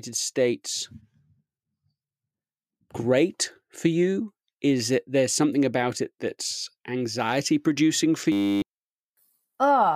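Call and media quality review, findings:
System hang loop, 8.32–8.62 s, after "that's anxiety producing for": 10 ms ring buffer replayed 30 times during a driver/system freeze, heard as a 100 Hz buzz; about 0.3 s of speech lost.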